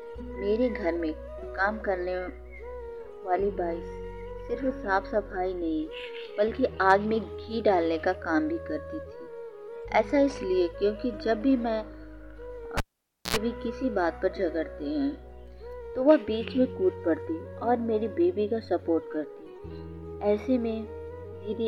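A cable pulled and plugged in interrupts the audio from 12.77 to 13.36 s. A pop marks the moment the live connection breaks, and the signal then drops to near silence for about 0.54 s. As the plug goes back in, only its tip makes contact at first, leaving the input ungrounded, so a 60 Hz mains buzz bursts through for roughly 0.08 s. A second pop follows as the sound returns.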